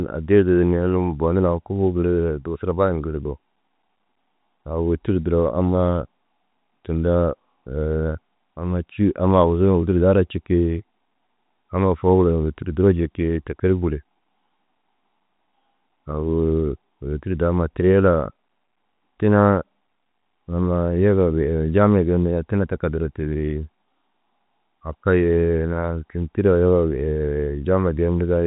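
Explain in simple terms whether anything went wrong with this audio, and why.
Nothing went wrong: the speech is carried by ordinary G.711 telephone coding, which cuts off everything above about 3.8 kHz and gives it the narrow, phone-line sound that format is designed to have.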